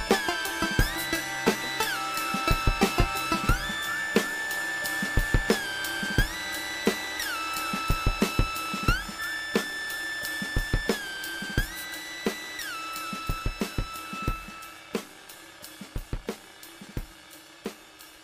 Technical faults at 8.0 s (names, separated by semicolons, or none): none